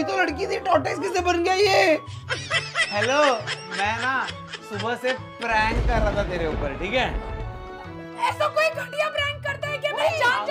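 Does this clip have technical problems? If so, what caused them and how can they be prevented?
No, the signal holds steady throughout with no audible dropouts, distortion, level jumps or other technical faults, so there is nothing here that needs preventing.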